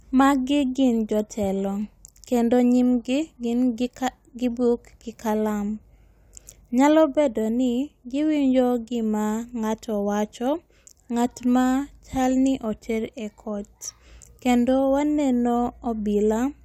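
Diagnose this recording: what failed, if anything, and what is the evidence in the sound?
Nothing in the signal chain failed: the speech holds steady level, continuity and timing across the recording, with no audible break, distortion or disturbance at any stage.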